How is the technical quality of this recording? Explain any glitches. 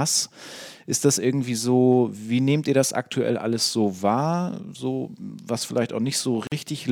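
Two faults are audible in this speech recording: a roughness from sample clock jitter, and one brief dropout near the end from a gap at a join of encoded pieces.

Sample clock jitter runs through the whole clip. The converter's clock wanders by something like a microsecond or two, so each sample is taken a little early or late. The resulting error scales with how steeply the waveform is changing, sitting roughly 35 dB below the signal. It sounds like a grainy hiss riding on loud and bright sounds and disappearing in pauses. A steady noise floor, by contrast, would stay audible in the silences.

The gap at a join of encoded pieces falls from 6.47 to 6.52 s and lasts about 47 ms. Two separately encoded pieces were joined without trimming, so the first piece's padded final frame and the second piece's start-up delay both remain in the audio as silence. The speech drops out briefly, with edges softened by the codec, then resumes exactly where it left off. 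Because nothing is skipped or repeated, it is distinguishable from a lost packet.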